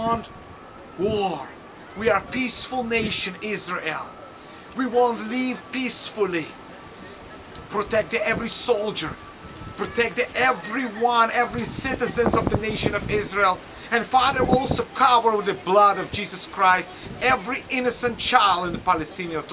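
No technical faults can be heard anywhere in the clip.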